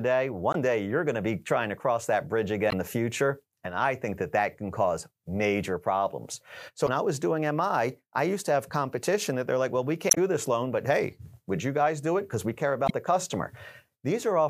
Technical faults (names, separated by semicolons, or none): damaged data in a compressed stream